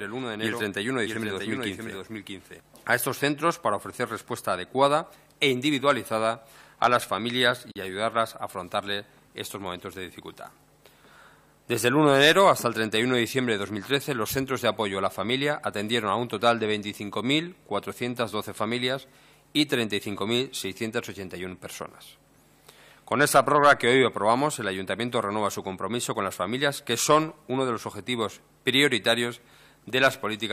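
From the first moment to 2.6 s, a doubled audio track is already running. A second full-band copy of the sound trails the original by roughly 0.7 s, at about 5 dB lower, with no decay or room colouring. The likely cause is a slower parallel capture path, or an edit leaving two copies out of step. On a spectrogram, every feature reappears as a slightly fainter, identical ghost shifted right by that fixed interval, and the copy cuts off sharply at 2.6 s.

From 7.72 to 7.76 s comes a gap at a join of encoded pieces. A silence of about 41 ms opens in otherwise continuous sound, and then the sound resumes exactly where it left off. The two sections were encoded separately and butted together untrimmed, so the encoder's start-up delay and final-frame padding remain as dead air. The waveform shows a flat dropout whose edges are smeared by the codec. On a spectrogram it appears as a thin, full-height blank stripe.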